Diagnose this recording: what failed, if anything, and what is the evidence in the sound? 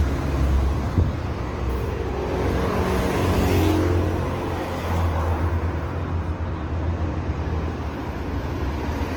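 The codec stage is the likely culprit: lossy Opus compression in its CELT music mode, running at a rate that fits roughly 16 kbps. Throughout all 9 seconds the everyday sounds come out plainly rough and grainy, with tonal parts turned noisy rather than swirly. The encoder holds each band's energy but, short of bits, fills the detail by folding lower bands or inserting noise. Bandwidth stays full, extending to about 20.1 kHz.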